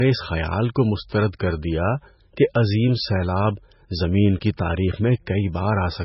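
Throughout the speech, nothing reaches above 5.6 kHz, leaving it dull and muffled, with the smeared texture of heavy compression. The likely cause is low-bitrate audio saved at a high bitrate. The sound points to an MP3 of around 16 kbit/s re-encoded at a much higher rate, which cannot restore what was discarded.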